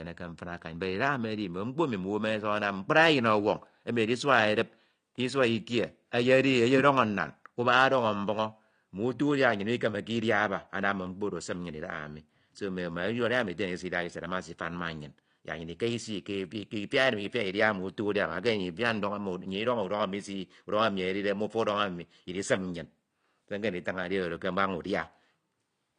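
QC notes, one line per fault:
throughout: AAC compression. The speech sounds dull and smeared, with a watery warble on held vowels and a fizzy edge on sibilants, plainly audible from start to finish. The likely cause is AAC-LC coding at a low bitrate, with damage consistent with about 32 kbps, where the encoder discards the top band and quantises what remains coarsely. On a spectrogram the energy ends at a hard, flat ceiling at 10 kHz.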